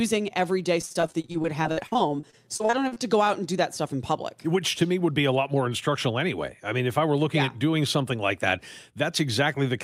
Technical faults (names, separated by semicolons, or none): repeated packet loss (robotic sound); jitter buffer speed-up